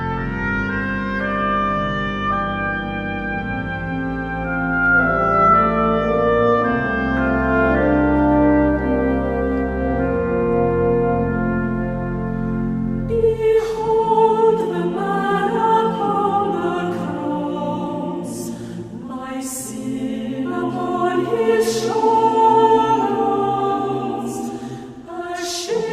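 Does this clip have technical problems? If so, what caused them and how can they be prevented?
No, there are no technical problems to report.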